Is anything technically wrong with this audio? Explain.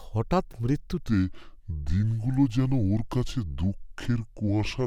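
Yes, there's a section at the wrong speed. From 1.0 s to the end, the speech plays at about 0.73 times its recorded speed, most likely from being clocked at the wrong rate. Pitch drops roughly five semitones along with it, so everything turns deep, slow and dragging.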